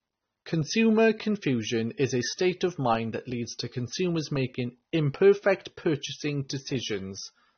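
The speech was likely passed through two lossy codecs in turn, a low-rate AAC encode followed by an MP3 encode, which is transcoding between lossy codecs. Throughout the clip nothing remains above 6.3 kHz, so consonants sound dull and muffled. The second encoder spends bits re-coding the first one's artefacts, and both sets of artefacts are heard together: the artefacts of a very low first-stage bitrate, overlaid with MP3's own.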